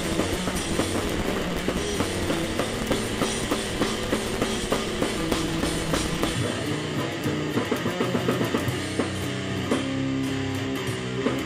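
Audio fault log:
0.00 to 6.36 s, block size mismatch (truncated): an upstream stage writes blocks nearly twice as long as the next stage reads, so the tail of each block is discarded. The sound plays about 1.88 times too fast at roughly normal pitch, with a 172 Hz buzz from the cuts, which fits 256-sample reads at 44.1 kHz. On a spectrogram, vertical lines sit every 5.8 ms over a harmonic comb at 172 Hz multiples. The waveform shows jumps at each block join.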